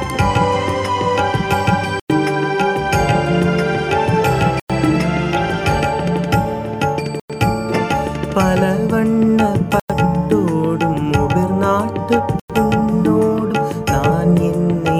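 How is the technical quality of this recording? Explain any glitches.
The recording is marred by two kinds of glitch: a regular series of dropouts and one brief decoding blip.

Gaps between chunks occur at 2.00, 4.60, 7.20, 9.80 and 12.40 s, each 100 ms of silence, recurring every 2.6 s. The audio was delivered in 2.5 s chunks, and something at each join, padding or a late-starting playback, inserted a short silent pause. No sound goes missing; it simply resumes after the hole. Unlike packet loss, the spacing is strictly periodic and the material before and after each gap is continuous.

A corrupt frame decoded at 5.37 s produces a single sharp blip lasting roughly one frame, peaking at around -15 dBFS. Damaged bits in one compressed frame were played through anyway, so misread gains or codes threw energy into the wrong frequencies for that instant. Unlike a chunk gap, this adds sound: a short chirp-like burst that sits on top of the audio.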